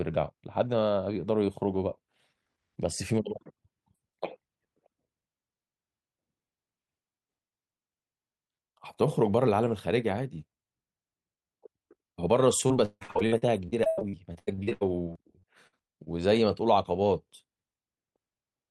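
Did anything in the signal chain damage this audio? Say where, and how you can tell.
Yes. From 12.67 to 16.08 s the speech turns choppy and robotic, a network-stage fault: repeated packet loss, with 26 gaps in that stretch (longest 156 ms). Each hole is patched by stretching the preceding sound, so about 31% of the span is concealed, giving the broken texture.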